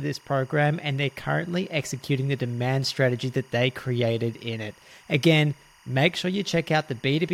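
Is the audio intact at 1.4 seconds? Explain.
No, timecode bleed runs through the whole speech clip, including 1.4 s. Linear timecode at 24 frames per second leaks in from a neighbouring track or cable, its square wave flipping between tones near 1 and 2 kHz, heard as a steady chirping warble well below the speech.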